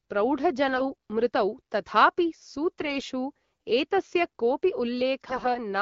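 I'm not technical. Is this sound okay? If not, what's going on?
No. Three short bursts of AMR bit errors occur, from 0.72 to 0.91 s, 2.80 to 2.96 s and 5.27 to 5.52 s. Some bits in the compressed speech arrived flipped, so the decoder rebuilt those moments wrongly. The speech keeps its pitch and loudness but turns hoarse, scratchy and gargly, worst in the last burst.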